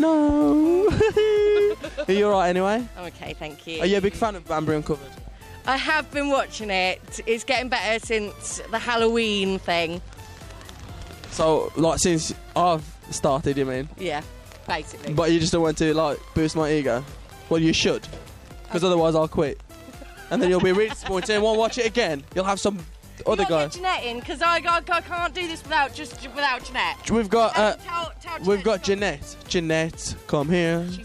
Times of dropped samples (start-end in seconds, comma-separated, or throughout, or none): 6.00